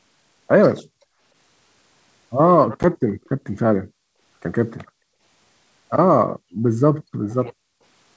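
This is a speech clip carried over a G.722 wideband call, and the coding itself sounds clean, with audio reaching up toward 8 kHz, which fits the full 64 kbit/s mode. The first fault is packet loss on an ADPCM call at 2.83 to 2.85 s, where about 10 ms drops out, roughly one packet's worth, and is replaced by a hard-edged gap of silence. Because ADPCM decodes each sample from the previous state, the decoder's predictor and step size lose sync with the sender during that gap. So the speech comes back slightly off, with a small click or roughness for a few tens of milliseconds until it recovers. Next, at 3.24 to 3.29 s there's a very faint echo leak, a delayed copy of the voice trailing about 296 ms behind and sitting around 40 dB down, so it's just a brief ghostly scrap. The likely cause is the far end playing the call on a loudspeaker, with its echo canceller not fully removing what its microphone picked up and sending that residue back. 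Finally, the background is gated by the echo canceller three times: 6.39 to 6.65 s, 6.98 to 7.29 s and 7.51 to 7.81 s. Each time the room sound suddenly sinks by about 38 to 39 dB for roughly 300 ms, then pops back. That happens because the canceller turns the microphone down hard while the loudspeaker is playing and releases it once that playback stops.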